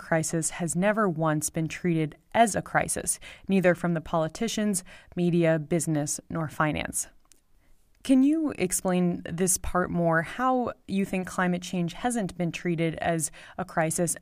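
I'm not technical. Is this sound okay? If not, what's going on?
Yes, this one's fine; there's nothing going wrong in the sound for you to worry about.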